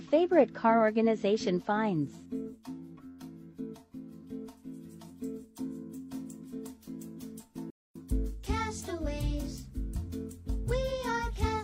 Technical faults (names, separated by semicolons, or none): AAC frame loss with muting